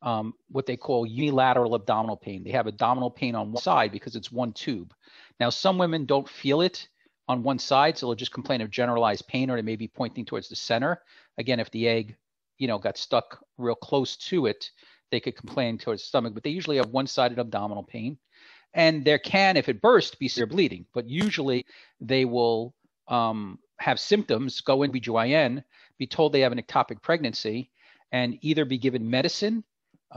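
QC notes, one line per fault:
1.19 s, 3.55 s, 20.37 s, 21.57 s, 24.87 s: compressed frames skipped. The audio jumps ahead by whole 46.4 ms frames, about 100, 150, 150, 100 and 300 ms, as missing or rejected frames go unplayed. A spectrogram shows where the content breaks.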